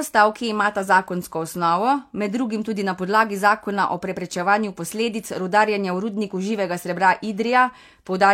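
Nothing technical goes wrong anywhere in this bit of speech, so there's no fault here to point to.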